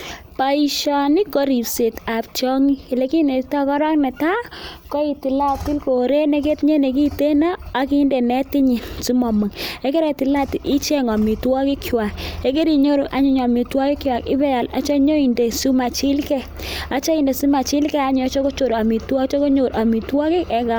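No technical faults are audible.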